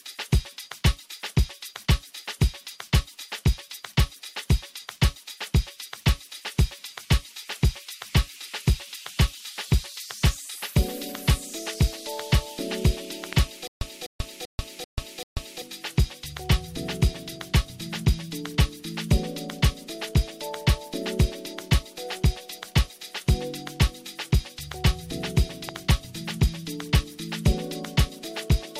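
At 10.27 to 10.29 s a loud pop lands on top of the sound, peaking roughly 10 dB above it, and a stronger one follows at 13.33 to 13.35 s, roughly 15 dB up. Each is likely a sudden voltage step, such as a switch or static discharge, shaped by the downstream circuitry. On a waveform they are single tall spikes standing clear of the surrounding level. On a spectrogram each is a thin vertical stripe spanning the full frequency range, while the underlying sound carries on beneath it.

From 13.67 to 15.62 s comes a stutter with silent gaps, likely a stalled player replaying its last fragment on every retry. A 250 ms burst repeats five times, each followed by 139 ms of digital silence, giving an even 389 ms cycle. The audio that belonged in that span is lost. On a waveform it shows as identical blocks separated by flat lines. On a spectrogram it appears as a repeating pattern broken by fully blank columns.

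At 25.69 to 25.93 s a double loud pop occurs, two thumps in quick succession, peaking roughly 10 dB above the signal. These show as a closely spaced pair of spikes on the waveform and twin vertical broadband stripes on the spectrogram.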